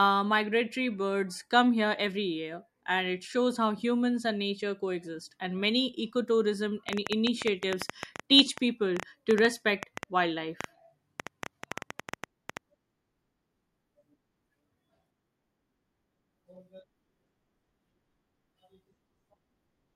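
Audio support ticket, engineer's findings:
Train of clicks, 6.89–12.58 s. Irregular ticking, about 7.4 per second, roughly 40 clicks, well above the speech level and audible in pauses too. Likely interference from nearby equipment or a faulty connection or power supply injecting repeated same-shaped pulses.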